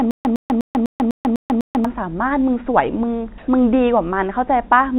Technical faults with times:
0.00-1.85 stutter with silent gaps
3.38-3.48 comfort noise in place of the background

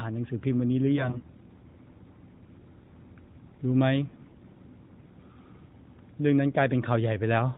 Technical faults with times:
0.96-1.25 AMR bit errors
4.06-4.30 AMR bit errors

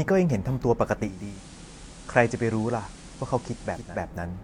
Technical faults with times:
0.94-4.14 digital radio blending to analogue

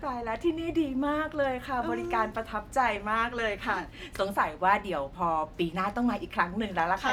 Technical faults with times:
none

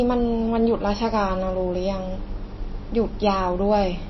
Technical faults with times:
0.00-4.09 MP3 compression

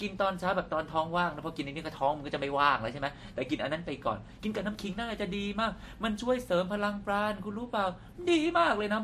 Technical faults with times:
0.00-9.04 transcoding between lossy codecs

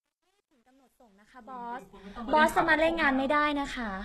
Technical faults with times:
0.00-4.04 HE-AAC compression
0.00-2.43 truncation distortion on a fade

